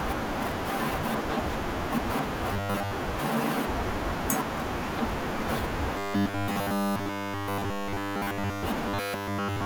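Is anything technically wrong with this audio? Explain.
Yes. Robotic sound from repeated short buffers occurs at 2.53 to 2.91 s, 5.98 to 8.63 s and 8.88 to 9.65 s. Fresh audio likely arrived too slowly, so roughly 10 ms chunks were looped in place of the skipped speech. This imposes a rigid metallic 100 Hz buzz, over most of the first stretch and all of the later two.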